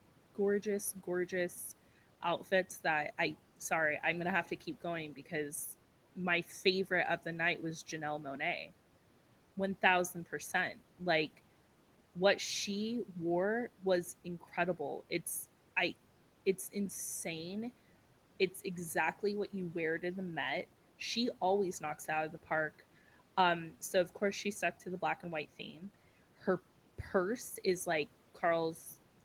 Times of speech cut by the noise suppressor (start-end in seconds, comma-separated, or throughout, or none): 25.72-25.82